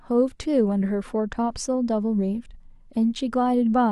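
At 2.49 s a brief garbled flutter breaks into the speech, lasting until about 2.55 s. This is frames out of order: two adjacent blocks of coded audio were decoded in swapped order, so that short stretch plays its second half before its first. The span of roughly 60 ms holds two runs of one frame each, about 23 ms per frame, exchanged. No time goes missing.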